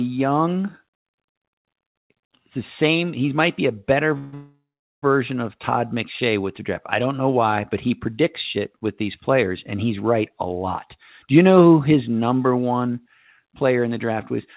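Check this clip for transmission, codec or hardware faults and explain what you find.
The speech carries one kind of fault, a call audio freeze, heard twice back to back from 4.18 s to 5.04 s. The narrow, telephone-band sound with nothing above 4 kHz fits a G.711 mu-law call at 64 kbps.

Call audio freeze, 4.18 to 4.34 s and then 4.34 to 5.04 s: the speech stalls and is stretched into a fading buzz or hiss, which in the second stretch dies to about 0.42 s of silence. The likely cause is packets held up in transit, leaving the jitter buffer empty so the receiver kept extending the last sound. The speech then resumes where it stopped, about 0.82 s late, with nothing missing.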